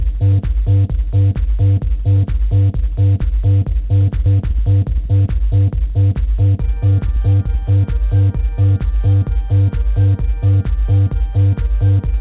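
At 4.26 s the audio makes a skip ahead. Roughly 0.7 s of sound never plays, and the material on either side is butted together with no silence or fill, so the sound lurches forward. This happens when a jitter buffer has later audio already queued and discards the stretch it can no longer place in time. On a waveform the envelope changes abruptly at a single point with no gap. A spectrogram shows a hard vertical seam where unrelated frames meet.

From 4.36 to 7.78 s a jitter buffer speed-up follows. The buffer is still holding more audio than it wants after the jump, so the receiver trims it down by repeatedly cutting out short pieces one or a few pitch periods long. About 0.3 s is removed in total, and playback runs at roughly 107% speed with unchanged pitch. It sounds slightly rushed. A spectrogram keeps its harmonic spacing, but the events arrive compressed in time. A close look at the waveform reveals many small splice points where cycles were dropped.

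Throughout, nothing reaches above 4 kHz, consistent with the narrowband G.711 mu-law path the call ran through.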